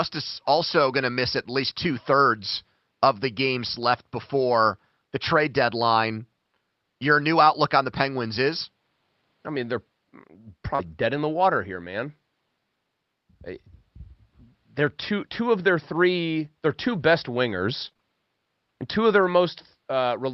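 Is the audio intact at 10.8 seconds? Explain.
No. Two faults overlap at that moment.

From 10.75 to 10.81 s there is short concealed packet loss. About 40 ms of audio never arrived in time, and the receiver covered roughly 32 ms of it by extending the preceding sound, following its pitch if it was voiced or shaping noise if it was not, then crossfading back into the real signal. To the ear this is a brief smear or wobble, and a short consonant may be missing. On a spectrogram the harmonics or noise band continue unnaturally steady across the gap. In the waveform the section looks repetitive and has no new transients.

From 10.79 to 10.89 s, just before "in the water here", there is a lost packet rebuilt from error correction. About 60 ms were replaced from low-bitrate copies carried in later Opus packets, which fits three 20 ms packets. There is no gap, but those frames sound rougher and noisier. 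On a spectrogram the harmonics blur and the noise floor rises between them.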